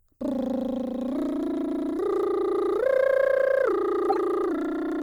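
At 4.10 to 4.18 s, a corrupt frame decoded breaks into the music. A few damaged frames play anyway, giving a loud burst, peaking near -10 dBFS.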